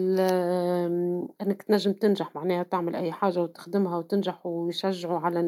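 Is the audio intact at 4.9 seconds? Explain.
Yes, the speech at 4.9 s is intact, with no dropout, click, distortion or other fault at that moment.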